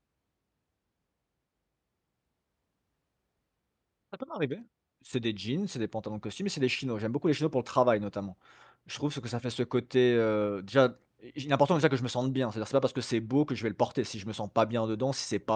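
No technical faults can be heard anywhere in the recording; the signal stays stable and intact throughout.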